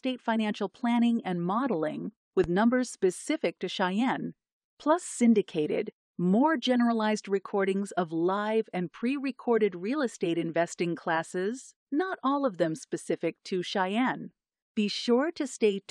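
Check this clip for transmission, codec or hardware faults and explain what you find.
One hardware-type fault is present. From 2.44 to 2.48 s, a single loud pop, a sharp thump roughly 10 dB above the speech, sits over the talking, which continues underneath. It is likely a voltage spike from a plug, switch or static discharge.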